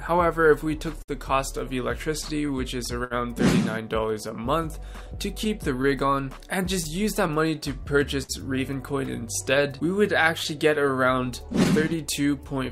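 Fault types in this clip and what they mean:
clock drift between sender and receiver: The pace never settles, with small hiccups and drags recurring at uneven intervals from start to finish. The sender's audio clock runs slow, by something like five percent, so the receiver's jitter buffer keeps draining and has to be refilled.
repeated timing corrections: From 0.03 to 12.55 s the tempo feels slightly sluggish and unsteady, playing at 98% speed. To keep pace with the slower sender, the receiver keeps repeating short pieces, always in the same direction, adding roughly a fifth of a second overall.
repeated stalls (stutter): The audio drags and stutters in three bursts, at 0.08 to 1.11 s, 2.22 to 3.14 s and 6.64 to 8.32 s, with hangs up to 64 ms. Each time the buffer ran empty, the receiver stretched the last sound, fading it in longer waits, so nothing is lost.
scattered short gaps: Brief ticks and slight smears dot the audio between 4.63 and 5.87 s and again between 9.43 and 11.86 s, each lasting only a few to about fifteen milliseconds. 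Isolated late or lost packets left tiny holes, which the receiver patched by continuing the previous sound.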